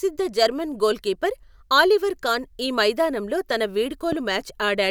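A loud pop sits at 4.12 to 4.15 s, just after "కాన్ ఈ మైదానంలో తన": a single sharp click a few decibels louder than the speech, which carries on beneath it. It is likely a brief voltage spike from a plug, switch or static discharge entering the signal chain.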